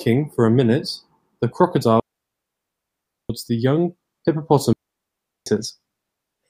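Speech cuts out twice in a digital wireless dropout. The first silence runs from 2.00 to 3.30 s, about 1.3 s. The second runs from 4.73 to 5.46 s, about 0.74 s. Each time, the receiver lost too much data and muted quickly. No noise burst surrounds either hole.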